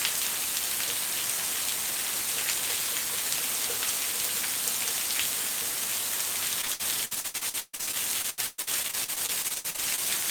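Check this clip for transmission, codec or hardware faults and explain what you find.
One transmission fault is present: repeated packet loss (robotic sound), from 6.61 s to 10.0 s. Across this stretch, dozens of short holes appear in quick succession, the longest about 134 ms. The receiver patches each hole by stretching out the last sound it had, which covers about 1.2 s, some 35% of the span. Another 1.2 s simply drops out. The result is choppy, robotic audio with pieces missing.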